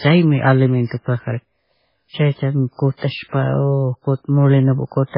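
From the first moment to the end, the speech sounds dull and watery. Nothing comes through above about 5.3 kHz, so the s sounds lose their edge, and the quieter detail swirls in and out as it's dropped and restored from one frame to the next. That's the signature of heavy MP3 compression, likely from an encoder starved of bits, and the damage fits a very low bitrate of around 16 kbps.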